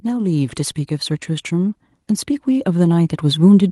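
A speech recording in which automatic gain rising takes hold from about 2.45 s and continues to the end of the clip: the gain control judged the input too quiet and began lifting its level, so the voice and the background noise swell together over roughly 1.3 s. On a waveform the envelope widens steadily across that stretch, with the noise floor between syllables climbing too; a spectrogram shows every band, including the low-level noise, brightening evenly as time goes on.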